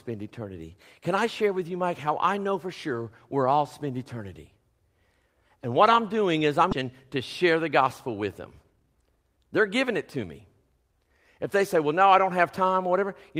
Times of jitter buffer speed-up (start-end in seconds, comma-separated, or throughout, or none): 6.81-8.23, 8.63-11.07